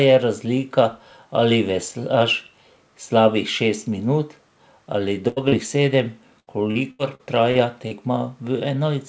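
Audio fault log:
5.28–5.39 s, burst of packet loss: a run of audio packets went missing, so the receiver extended the last speech sound for about 84 ms while fading it down. The voice smears into a held buzz or hiss, and about 80 ms of speech is skipped.
5.48–5.55 s, short concealed packet loss: a further few hundredths of a second of audio failed to reach the decoder in time. The gap was bridged by continuing the preceding sound for about 34 ms and then blending back in, producing a brief wobble as roughly 40 ms of speech disappears.
6.40–7.94 s, repeated packet loss (robotic sound): packets dropped out six separate times in this stretch, the longest gap lasting 78 ms. Each gap is patched by extending the sound just before it, and about a fifth of the span is concealed, so the voice turns choppy, with about 320 ms of speech lost.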